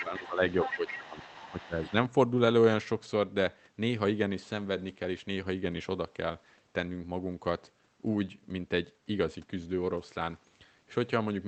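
From 0.00 to 0.05 s a brief scrap of a second voice sits under the speech. This is the other side's voice leaking through, at roughly 5 dB below the talker. The likely cause is loudspeaker playback reaching the microphone, with the echo canceller failing to remove all of it. Meanwhile, from 0.00 to 0.42 s, the talker's level sags by around 10 dB. This is speech suppressed in double talk. Both sides are active at once. The canceller likely cannot tell the talker from the echo, so it turns everything down. From 0.5 to 1.66 s the leak returns for longer, roughly 10 dB under the speech. Overlapping it, from 0.64 to 1.74 s, the talker dips harder, by about 15 dB. From 1.82 to 1.92 s a faint trace of the far voice is heard, around 20 dB down. A small dip of about 5 dB follows from 1.90 to 1.95 s.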